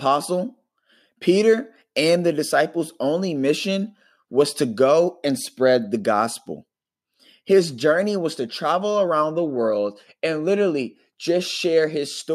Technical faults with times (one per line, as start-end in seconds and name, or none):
none